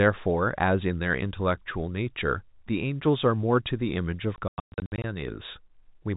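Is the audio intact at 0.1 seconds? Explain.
Yes, at 0.1 seconds the speech is intact, with no fault at that moment.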